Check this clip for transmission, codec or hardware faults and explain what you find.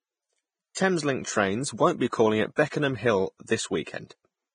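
Two faults are audible in this speech clip: heavy lossy coding across the whole recording, and six pre-echo events on sharp onsets.

Vorbis compression, throughout: nothing is present above 9.7 kHz, and the remaining treble is grainy and hissy, with roughened tones and softened attacks. This is likely low-rate Vorbis coding, fitting roughly 21 kbps, where coarse quantisation replaces fine high-frequency detail with noise of similar energy.

Pre-echo at 0.75–0.77 s, 2.09–2.13 s just after "trains won't be", 2.56–2.58 s, 2.69–2.72 s, 3.47 s, and 3.84–3.87 s: a brief hiss of 17 to 36 ms precedes each onset. The codec spreads quantisation noise across a whole transform block, so noise sized for the attack leaks into the quiet moment before it, smearing the onset.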